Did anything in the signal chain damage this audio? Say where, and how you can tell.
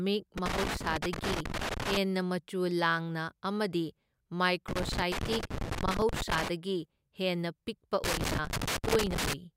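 Yes, loose connector crackle in the analogue wiring: scratchy bursts at 0.38–1.97 s, 4.68–6.48 s and 8.04–9.33 s (after "ꯍꯦꯟꯅ ꯄꯤꯛꯄ"), where a flaky contact keeps chopping the speech.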